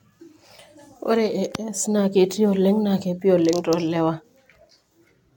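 From start to finish the speech has a swirly, smeared and hollow quality, with consonant attacks blurred and nothing above 17 kHz. This points to generation loss, likely from the audio being run through an AAC-LC codec at around 96 kbit/s about four times in succession. Each re-encode quantises again on a shifted frame grid, so the noise and spectral holes from every pass accumulate beyond what a single encode would leave.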